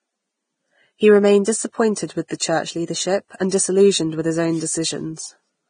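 A speech clip with heavy lossy-coding damage throughout, likely from Vorbis compression at a low setting; the hiss and grain fit a bitrate around 22 kbps. Nothing survives above 9.7 kHz, so a spectrogram shows a hard ceiling there. The treble that remains sounds like noisy, speckled texture rather than clean harmonics, and consonant onsets are blurred. At 2.28 to 2.31 s, just before "church leadership and disillusioned", there is a pre-echo. A short hiss of about 25 ms runs ahead of the sharp onset, because the codec spread the noise meant for the loud attack across the quiet moment before it. On the waveform this appears as a low fuzz just ahead of the transient. On a spectrogram it is a smeared vertical wash leading the attack.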